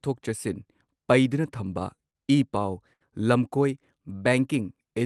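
At 2.10 to 2.16 s and again at 2.93 to 3.02 s there is a short stall from a late packet. The jitter buffer ran dry, so the receiver held the last sound for 42 ms and then 74 ms before resuming where it stopped. No speech is lost, but each spot sounds briefly frozen, with a faint buzz or dip.

From 3.97 to 4.30 s there is a jitter buffer slow-down. To rebuild its reserve, the receiver repeated pitch periods or bits of pauses, adding 52 ms. The speech plays at 87% speed with its pitch unchanged, so it sounds drawn out.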